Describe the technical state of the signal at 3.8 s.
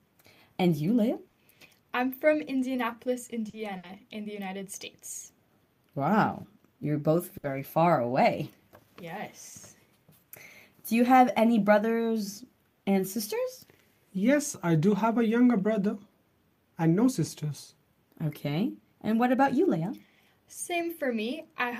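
At 3.8 s the sound freezes into a fading continuation of the last sound for about 60 ms, then jumps ahead: a burst of packet loss from 3.77 to 3.86 s, concealed by extending and attenuating the last audio.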